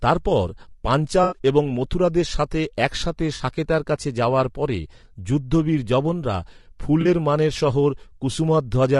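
From start to end the speech sounds rough and grainy. Noise fills the gaps between harmonics, and the top band sounds thin and synthetic. This is likely low-delay AAC compression. Its short frames resolve pitch poorly, and the damage fits a bitrate near 32 kbps.

AAC frame loss with concealment occurs three times. From 1.23 to 1.38 s, just before "এবং মথুরাদের সাথে একসাথে", there is a smeared, noisy patch. About 80 ms of audio is missing, which points to four lost frames. The decoder rebuilt the gap from the last good spectrum. Shorter phasey blurs follow at 3.35 to 3.41 s, before "সাকেতার কাছে যাওয়ার পরে", and at 7.01 to 7.07 s, before "মানের শহর". Each hides about 40 ms, consistent with two frames.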